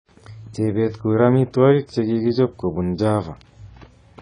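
Throughout the speech, nothing is heard above 10 kHz and codec damage is plainly audible, likely from AAC compression at a low bitrate such as 24 kbps. Unlike a plain low-pass filter, the coder also coarsely quantises what remains below that cut-off.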